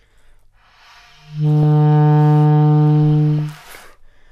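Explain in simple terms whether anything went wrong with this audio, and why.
Weak digital radio reception let corrupted data slip past the receiver's error correction, a fault called DAB burbling. When a small share of the digital bits arrive wrong, the decoder puts short blips of noise into parts of the audio for an instant. Here that happens twice, at about 1.63 s and again at 3.39 s, each time as a brief glitch laid over the sound.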